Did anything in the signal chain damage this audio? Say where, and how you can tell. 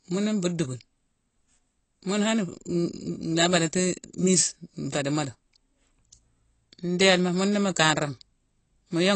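Yes. The speech sounds dull and smeared throughout, empty above 8.3 kHz, with fizzy sibilants. That points to the codec stage, likely AAC compression at a low bitrate.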